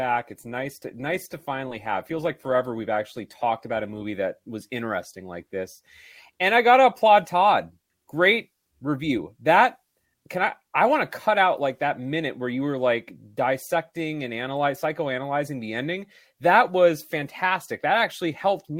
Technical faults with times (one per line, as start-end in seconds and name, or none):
0.00-4.00 adaptive stream starting at a low bitrate